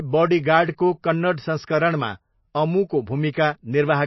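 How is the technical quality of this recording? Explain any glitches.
The recording has plainly audible compression damage from start to finish.

MP3 compression, throughout: the speech has nothing above 5.8 kHz, and it comes through watery and swirling, with a metallic chirp on the s sounds. This is likely heavy MP3 encoding at a very low bitrate, with the damage pointing to something near 24 kbps. Starved of bits, the encoder discards all treble above that fixed cut-off and drops quieter frequency lines, which flicker in and out between frames and smear the consonant onsets.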